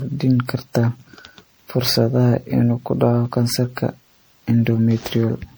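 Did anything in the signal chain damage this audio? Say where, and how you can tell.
Yes, at the codec stage: generation loss runs through the whole speech clip, with swirly, hollow smearing and blurred consonant attacks. This is likely from repeated MP3 re-encoding, about ten passes at a rate near 96 kbit/s. A spectrogram shows accumulated spectral holes, and the waveform shows softened transients.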